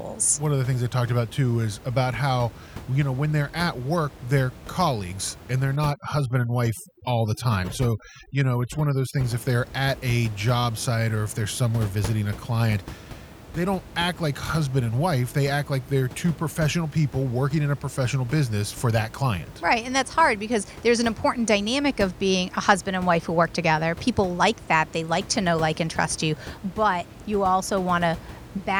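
From 5.76 to 9.24 s, after "they're colleagues and they're" and before "if they're at a", overdone noise removal cuts frequency bands sitting near the room noise, about 17 dB below the speech. Background drops and breaks up into twinkling specks.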